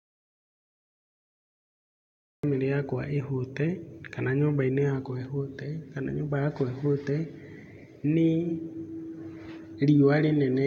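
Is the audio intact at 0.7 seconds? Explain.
No. At 0.7 seconds the speech sits inside an audio dropout to silence that is already under way when the clip begins and runs until about 2.43 s. The input was likely lost, through a disconnection, a link failure or a mute, while recording carried on writing silence. What sets it apart from a natural pause or noise gating is that the gap is silent with no room tone, and the speech enters abruptly once the signal returns.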